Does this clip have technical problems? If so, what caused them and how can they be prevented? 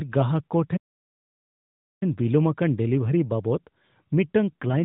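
Yes. After "ᱜᱟᱦᱟᱠ ᱠᱚ" there's a playback stall. The speech cuts out from 0.76 to 2.03 s, about 1.25 s of silence, most likely because the player ran dry or its thread got blocked. A deeper playback buffer and keeping the audio thread unblocked would prevent it.

Near the end, from 4.51 to 4.84 s, there's an AMR rate drop. Over the light narrowband AMR coding, the voice goes rougher and more synthetic with no gap, which fits the network stepping the codec down from 12.2 to 5.9 kbps on a weak link. A stronger radio connection would keep the rate from dropping.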